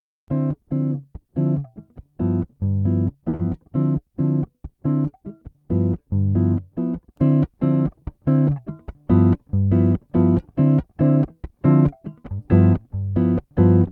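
At 3.29 s the sound hangs for a moment: the last sound is drawn out for about 40 ms with a faint buzzy flatness before the audio picks up again at the same point, so nothing is skipped but the timing stumbles. This is a short stall from a late packet. A packet had not arrived when it was due, the jitter buffer ran dry, and the receiver extended what it already had until the packet turned up, adding about 40 ms of delay to the stream.

Directly after, from 3.35 to 3.41 s, there is a brief smear and wobble where the real audio should be, and about 40 ms of it is simply gone. This is short concealed packet loss. That stretch never reached the decoder in time, so the receiver synthesised a continuation of the preceding sound to cover the gap and then crossfaded back into the genuine signal once it resumed.

Between 9.45 and 9.69 s the audio briefly sounds rushed, running at about 112% of normal speed while the pitch stays put. 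This is a jitter buffer speed-up. The buffer was holding more audio than its target, so the receiver trimmed many tiny pitch-period-sized slices in quick succession, cutting roughly 40 ms overall to bring the delay back down.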